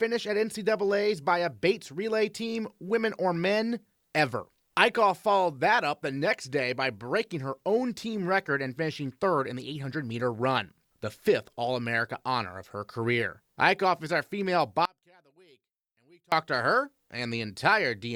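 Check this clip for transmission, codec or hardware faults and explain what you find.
One fault is audible. From 14.85 to 16.32 s, after "is our female", the speech drops about 33 dB. Likely one channel inverted, so the centred voice cancels in mono.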